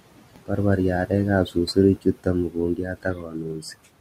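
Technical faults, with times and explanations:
Throughout, noise suppressor artifacts: the room noise, sitting about 17 dB below the speech, is pulled down by about 18 dB in the gaps and swells back under the speech. The noise moves this way because the suppressor gates each band frame by frame.
1.46–1.77 s, 1.96–2.27 s, 2.49–2.58 s and 2.76–3.77 s, speech cut by the noise suppressor: parts of the speech go faint and swallowed. The drops are about 14 to 18 dB and the longest run lasts about 0.7 s. The suppressor mistook the quieter speech for noise and turned it down along with the background.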